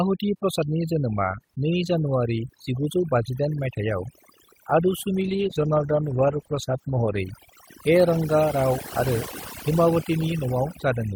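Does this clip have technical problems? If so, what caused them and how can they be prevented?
Yes. Overdone noise removal affects the whole clip. The suppressor cuts individual frequency bands whenever they sit near its noise estimate, so the background collapses to near silence with twinkling specks. A spectrogram would show scattered isolated dots between phrases and ragged gaps inside the harmonics. Setting the reduction strength lower, so the noise is only lowered rather than removed outright, would prevent this.

A call bitrate drop runs from 5.22 to 7.27 s and stays at its worst for about 2 s. The sound there turns rough and muffled, which fits the encoder falling from roughly 32 kbps to 14 kbps and discarding the top of the spectrum. A spectrogram would show the high band cut off flat across that stretch. More stable network capacity, or a higher minimum bitrate, would prevent it.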